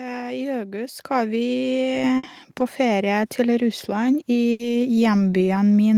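A speech recording with three faults. At 1.02 s, just after "I august", the call software stepped up the microphone volume, so voice and background jump together by about 7 dB. Bursts of packet loss at 2.17–2.25 s and 4.51–4.61 s made the receiver stretch and fade the last sound for 60 ms and 80 ms before resuming, skipping the audio in between.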